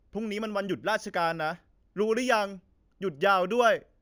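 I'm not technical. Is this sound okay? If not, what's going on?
No. The speech was converted to a higher sample rate in a crude way, producing imaging from linear upsampling. It fits audio made at 16 kHz and raised to 44.1 kHz by joining samples with straight lines. That leaves faint mirror copies of the sound between 8 and 16 kHz and dulls the top of the original range. Throughout all of the speech, this comes across as a light metallic shimmer on hissy sounds like s and sh.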